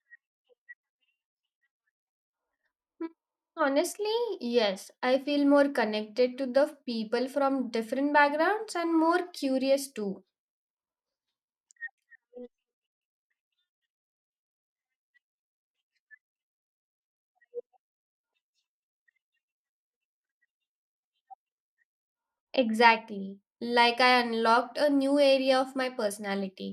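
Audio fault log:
No faults can be heard anywhere in this speech.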